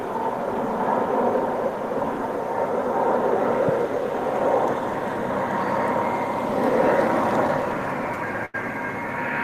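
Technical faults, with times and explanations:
8.45–8.56 s, burst of packet loss: roughly 80 ms of audio was lost or arrived too late, so the receiver stretched the last sound for about 83 ms while fading it, then jumped ahead. On a spectrogram this shows as a smeared, dimming band, followed by a sharp discontinuity in the waveform.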